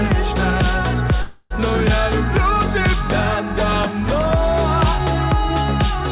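At 1.22 s the sound stops moving forward and the last moment is stretched into a buzzy, hissy tail that fades without reaching silence. It lasts about 0.28 s before the audio picks up at 1.53 s exactly where it left off, with nothing skipped. This is a call audio freeze, likely from packets held up in transit so the jitter buffer ran dry and the receiver filled the wait. Throughout, nothing sounds above 4 kHz, consistent with narrowband G.711 call coding.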